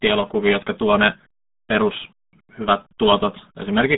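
The whole clip is coded with the RealAudio 14.4 codec. It was a low-rate speech coder for dial-up modems, and the sound fits an 8 kbit/s stream. To hit that rate it keeps a telephone-like band and discards the rest. What survives sits roughly between 200 Hz and 3.6 kHz. Nothing comes through above 3.8 kHz. The speech sounds muffled and boxy. Heavy coding damage adds a gargling, watery texture from start to finish.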